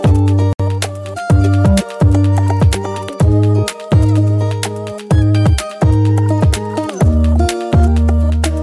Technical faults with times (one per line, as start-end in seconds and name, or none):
0.00-8.62 wrong sample rate